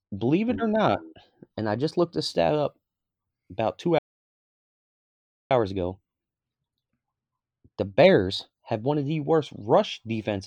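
At 3.99 s the speech cuts out mid-flow and stays silent for about 1.52 s, picking up again at 5.51 s. That gap is a playback stall, most likely the player running dry of data or its thread getting blocked until it recovered.

Right after, from 5.51 to 8.51 s, there's time-compressed catch-up: the speech runs at roughly 1.15 times normal speed while keeping its normal pitch, because the player trims and cross-fades small slices to work off the backlog the stall built up.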